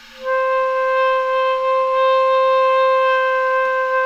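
No faults turn up anywhere in this everyday-sound recording.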